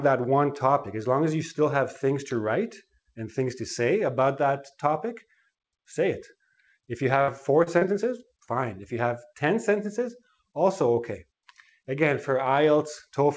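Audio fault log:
7.22–7.31 s, burst of packet loss: about 56 ms is filled by stretching and fading the last sound. Playback then resumes with roughly 30 ms skipped.
7.64–7.69 s, 7.78–7.84 s and 8.44–8.50 s, short concealed packet loss: each hole is patched with about 30 ms of continued sound, heard as a brief smear or wobble.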